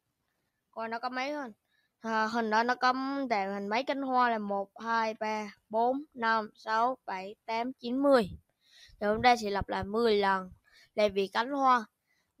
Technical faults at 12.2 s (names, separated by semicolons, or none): sound cut by the noise suppressor